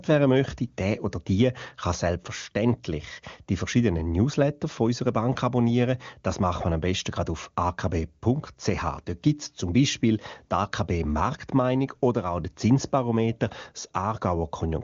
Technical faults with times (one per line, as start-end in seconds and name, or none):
none